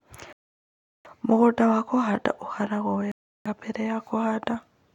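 At 0.33 s the speech cuts to silence. It returns at 1.07 s after a gap of about 0.72 s. A second dropout runs from 3.12 s to 3.47 s, silent for about 0.34 s. Both are a Bluetooth stall, likely caused by radio interference delaying packets. The headphones' buffer empties, so playback simply stops. When the resent data arrives, the sound resumes. Each gap is clean and abrupt, with no fade.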